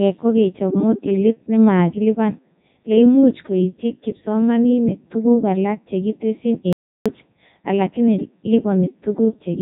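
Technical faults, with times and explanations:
Throughout, Codec 2 vocoder: the speech is carried at 3.2 kbit/s as pitch, voicing, energy and a spectral envelope, then rebuilt from sine waves, giving a heavily robotic, buzzy voice. A spectrogram shows neat harmonic combs, nothing above 3.8 kHz, and a waveform unlike the original.
6.73 to 7.06 s, audio dropout to silence: right after "tuguk alak chekitesyi" the sound stops dead for about 330 ms, with no room tone, then resumes mid-flow. This likely comes from the input being lost while silence was written. The waveform is flat and the spectrogram shows a blank vertical band.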